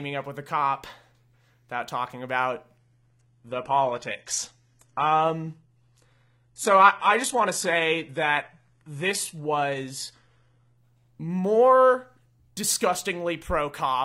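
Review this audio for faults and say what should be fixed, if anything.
Adaptive stream at a lower bitrate, from 2.77 s to 10.77 s, right after "without talking about". With no gap, the speech abruptly loses its top end, with nothing above 11.8 kHz, and codec artefacts thicken, then full quality returns just as suddenly. This points to the player dropping from a high-bitrate AAC rendition, around 96 kbit/s, to a low-bitrate HE-AAC one near 16 kbit/s while the connection slowed. To prevent it, capture from the source or a fixed high-bitrate rendition rather than an adaptive stream.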